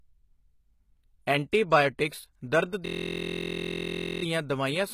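Throughout the speech, the upper spectrum has a gritty, metallic sheen: sibilants sound lispy, and nothing reaches above 14.9 kHz. This is plainly audible damage, likely from HE-AAC compression at a low rate in the region of 20 kbps. The codec spends its bits on the lower band and fakes the treble by copying lower bands upward under a coarse envelope, so the rebuilt highs' harmonics do not align with the real ones below.

At 1.52 s a brief hiss of about 10 ms sits just ahead of a sharp onset, softening its attack. This is pre-echo. The transform block holding that onset spreads its quantisation noise evenly over its whole length, so noise scaled for the loud attack also lands in the quiet stretch just before it, where nothing masks it.

From 2.86 s to 4.23 s the audio turns into a steady, rough buzz at about 43.1 Hz, ending just before "ਦਵਾਈਆਂ ਸਮੇਤ". This is a system hang loop. While the computer or driver stalled, the playback hardware kept replaying the same 23.22 ms slice of its ring buffer, which fits a 1024-sample buffer, repeating it roughly sixty times. 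Because the slice is so short, the repeats merge into a pitched drone rather than a stutter.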